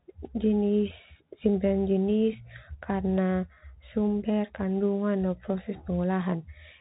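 Right from the start and for the whole clip, the speech carries the Bluetooth CVSD headset codec sound. Everything above about 3.8 kHz is gone, so it's boxy and narrow. The one-bit delta coding can't keep up with fast loud peaks, which shows as plainly audible grit, scratchy s sounds, and a granular hiss under it all.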